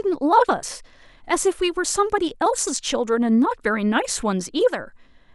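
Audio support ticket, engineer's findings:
Engineer's findings: no faults found on this speech recording.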